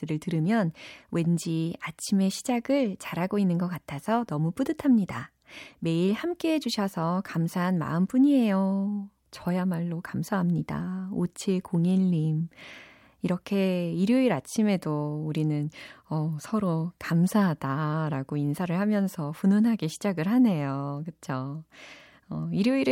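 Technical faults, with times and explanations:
No technical faults can be heard anywhere in this speech recording.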